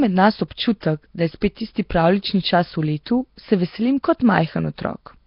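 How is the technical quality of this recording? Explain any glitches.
The technical quality is poor: heavy low-bitrate codec damage runs through the whole speech recording, and one attack is smeared by pre-echo.

Throughout, the sound has a rough, hissy halo and a watery, underwater smear, with nothing above 5.3 kHz. This is likely Nellymoser compression, at a rate that fits roughly 22 kbps. The codec spends a fixed two bits per sample on 256-sample blocks, so weak bands get no bits and are filled with synthetic noise. Unlike plain MP3 warble, the grain here is a constant noisy haze rather than a metallic swirl.

From 0.81 to 0.83 s, just after "med nas", a short hiss arrives ahead of a sharp onset, and the attack itself sounds soft. This is pre-echo. The transform spreads quantisation noise evenly across its block, so noise scaled for the loud onset also fills the quiet gap before it, here over about 20 ms. 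A reverb or echo would trail the sound. Pre-echo comes before it.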